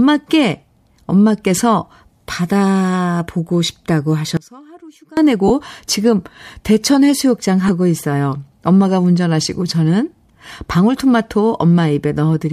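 Lost LE Audio frames at 3.49 s: a brief gap, about the length of one 10 ms frame, where the LC3 decoder fills in by repeating the previous spectrum with scrambled phase. It comes across as a tiny noisy blur in the sound.

One channel inverted from 4.37 to 5.17 s: the level drops by about 25 dB and the speech turns faint. The likely cause is one stereo channel with reversed polarity, so the shared centre content cancels when the two channels are mixed to mono.

More lost LE Audio frames follow at 5.48 to 5.51 s, roughly two frames' worth, and again at 7.68 s, about one frame. Each time the concealment smears that instant into a short noisy patch, with nothing long enough to fade towards silence.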